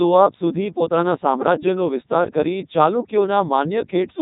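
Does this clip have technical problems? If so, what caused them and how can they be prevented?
Yes. Codec 2 vocoder damage runs through the whole clip. The speech sounds robotic and buzzy, which fits Codec 2 at about 3.2 kbit/s. Only pitch, voicing, energy and spectral shape survive, and the decoder rebuilds everything from sine waves. To prevent it, record or transmit through a higher-rate waveform codec instead of a low-bitrate vocoder.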